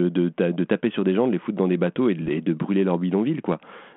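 A rough, popping burst with a brief level change at 2.21–2.29 s, after "dans des bateaux et": bit errors on an ADPCM link upsetting the decoder's step size and prediction.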